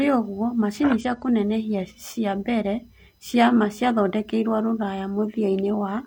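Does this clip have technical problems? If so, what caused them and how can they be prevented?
Yes. From 1.00 to 1.04 s the speech breaks into a brief glitch from damaged data in a compressed stream: corrupted bytes made the decoder misread frames and lose sync until it found a valid header. A spectrogram shows a brief broadband smear, and the waveform shows an abrupt discontinuity. Preventing it means sending the stream over an error-checked transport and checking files against checksums, so that corrupted data is caught before it is decoded.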